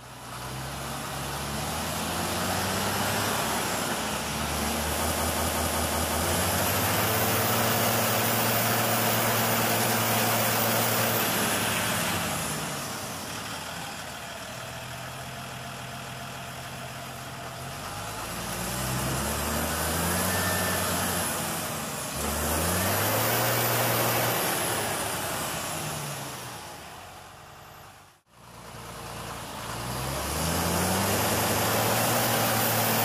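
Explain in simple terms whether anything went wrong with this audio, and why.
Something did go wrong: the audio has repeated frames, where short chunks of the recording were stored more than once and replay like a skipping CD. At 5.07 to 6.19 s a 0.19 s piece loops six extra times; at 9.80 s a 0.09 s piece plays once more; 15.51 to 16.35 s repeats a 0.28 s piece three times; 27.36 to 27.83 s repeats 0.09 s five times; and 31.26 to 31.64 s repeats 0.19 s twice. Unlike a dropout, nothing goes missing. The same sound comes back.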